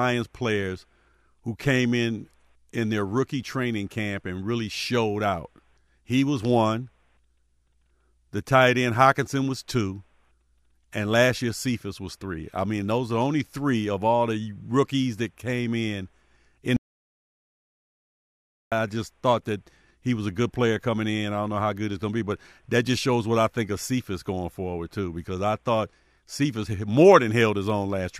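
At 16.77 s the speech cuts out abruptly into an audio dropout to silence lasting until 18.72 s, roughly 1.95 s of silence with no room tone. The input was likely lost or muted while recording continued, so that stretch of speech is gone.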